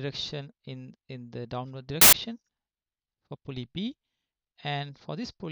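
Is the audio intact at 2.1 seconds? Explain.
No, not at 2.1 seconds. From about 2.01 to 2.13 s there's a case of file tags played as audio: a block of embedded cover-picture data got decoded as if it were samples. Since that picture data is already compressed, it looks essentially random, so for those roughly 0.11 s you get a burst of very loud white noise that switches on and off abruptly, with hard edges on both sides.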